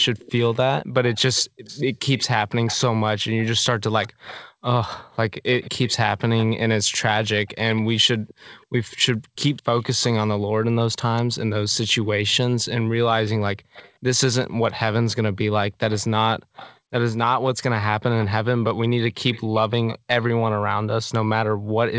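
Echo leak, likely from a far-end loudspeaker whose echo canceller let part of its microphone pickup through, sends back a faint copy of the speech 208 ms late. It occurs at 0.00–4.45, 5.53–6.45, 7.72–10.04, 11.17–12.36, 13.74–14.73, 15.91–16.78, 18.21–18.27 and 19.33–20.25 s. The copy sits about 20 dB under the speech, and about 25 dB under from 7.72 to 14.73 s, trailing phrases as a slapback.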